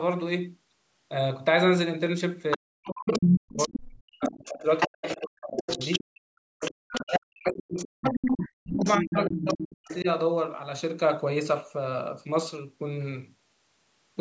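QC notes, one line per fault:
2.51–6.0 s, 6.59–7.11 s and 7.82–10.01 s: other side's voice leaking through. A second voice sits under the main talker, roughly as loud as the talker in the first stretch, about 10 dB below in the second and about 5 dB below in the third. This is likely loudspeaker playback from the far end reaching the microphone and surviving the echo canceller, so fragments of the remote voice are sent back.
2.56–6.09 s and 7.03–10.07 s: speech suppressed in double talk. While the leaked voice plays, the main talker repeatedly dips, dulls and drops out in pieces, falling by as much as about 40 dB. Roughly three seconds of the first span and two of the second are affected. Both voices overlap, and the echo canceller likely could not separate the local talker from the echo, so it pulled everything down together.
6.37–6.75 s: background gated by the echo canceller. The room tone abruptly sinks by up to about 32 dB for a total of about a fifth of a second, then comes back. 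With the loudspeaker active, the canceller clamped the microphone hard to block echo, taking the ambient sound with it until it released.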